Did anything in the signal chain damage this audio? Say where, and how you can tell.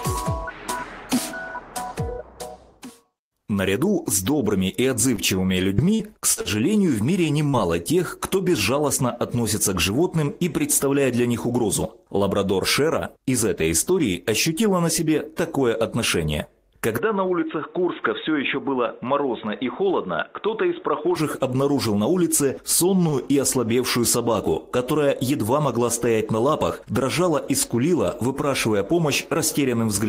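Yes. At 5.15 to 5.20 s the network delivered a packet late and the jitter buffer ran dry, a short stall from a late packet. The receiver held the last sound for 20 ms and resumed where it left off, so nothing is lost. The delay grew by 20 ms, heard as a sound held slightly too long.

From 5.74 to 6.48 s there is repeated packet loss, giving a robotic sound. Six separate gaps, the longest 42 ms, were patched by extending the previous audio. Concealment covers about a quarter of that span and 120 ms is gone, so the passage sounds choppy, with pieces missing.

At 7.49 to 7.56 s a short concealed packet loss occurs. About 40 ms never reached the decoder in time, and the receiver synthesised 42 ms from the preceding audio before blending back. The result is a quick smear or wobble, with that fragment missing.

From 11.30 to 11.69 s a jitter buffer speed-up trims excess queued audio. The receiver cut out several short pitch-period slices, about 40 ms in total, so playback runs at 109% speed with unchanged pitch. 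That stretch sounds slightly rushed.

From 16.98 to 21.16 s the input was likely switched to a poorer device at the capture stage. The change is instant, with no gap. Content above 3.8 kHz vanishes, the level drops by about 5 dB, and a new noise floor appears about 40 dB down, making the sound dull and boxy.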